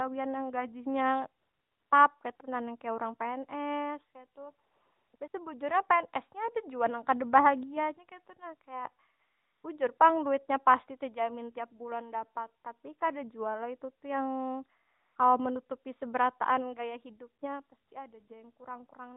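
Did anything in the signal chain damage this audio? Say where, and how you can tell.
Yes. Call processing judged the talker silent, stopped sending speech frames, and let the receiver substitute AMR comfort noise: ten smooth synthetic patches of 20 to 500 ms between 1.4 and 18.3 s.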